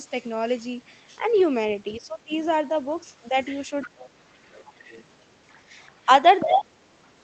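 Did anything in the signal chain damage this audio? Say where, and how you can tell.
Yes, in call processing. Speech is suppressed in double talk at 1.98–2.32, 3.7–4.36, 5.67–5.72 and 6.44–6.77 s, dipping about 10 to 30 dB, likely from the echo canceller ducking both sides. Unlike packet-loss gaps, these dips coincide with the far voice.

The other side's voice leaks through at 3.38–4.09, 4.44–5.04 and 6.4–6.46 s, about 10 to 25 dB below the talker. This is likely loudspeaker echo the canceller left behind, heard as a distinct second voice rather than reverberant smear.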